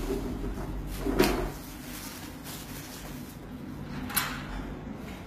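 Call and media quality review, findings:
HE-AAC compression, whole clip. Treble bright but synthetic: upper band gritty and metallic, with no content above 14.9 kHz. Probable component: likely an HE-AAC v2 encoder at a low rate, consistent with a 20 kbps stream. Mechanism: only the lower spectrum is coded, and the top is rebuilt from copied lower bands under a coarse envelope, so upper partials misalign with the coded range. Damage plainly audible.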